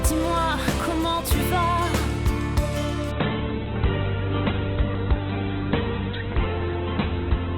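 At 3.11 s the audio suddenly steps down in quality and stays that way to the end. That's an adaptive stream switching to a lower bitrate: the connection slowed, so the player fetched a leaner encoding. The switch is seamless with no gap, but everything above about 4.1 kHz vanishes, and the sound turns dull with more codec artefacts. It fits a jump from something like 64 kbit/s Opus down to about 8 kbit/s.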